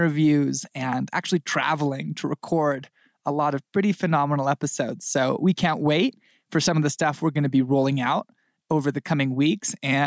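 Input gain set far too high, likely with a fast limiter pulling it back, causes gain pumping throughout this speech clip: the level ducks by around 5 dB on each loud sound, squashing the dynamics. The call microphone processing is working normally, with nothing above 8 kHz.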